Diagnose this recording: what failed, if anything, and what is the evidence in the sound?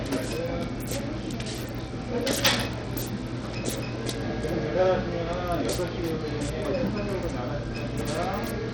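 Treble flickers and drops out throughout, with gritty grain on top: a codec-stage fault, likely Bluetooth SBC compression starving its upper sub-bands at a bitrate near 80 kbps.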